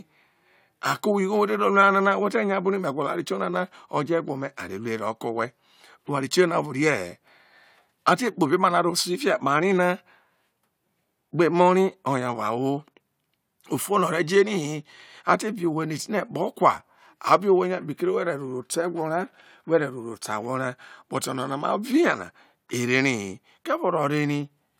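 No technical faults can be heard anywhere in the recording.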